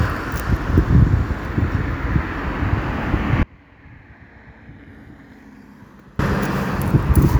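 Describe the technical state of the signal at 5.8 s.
At 5.8 s the signal sits inside an audio dropout to a faint residue running from 3.43 s to 6.19 s, about 2.76 s in all. The wanted sound likely cut out upstream while the path after the break stayed live, so instead of silence a weak leak of the sound remains, roughly 30 dB below its normal level. On a waveform the envelope collapses abruptly at 3.43 s into a thin band and snaps back at 6.19 s. A spectrogram shows a sharp-edged, faded block with no gradual fade at either end.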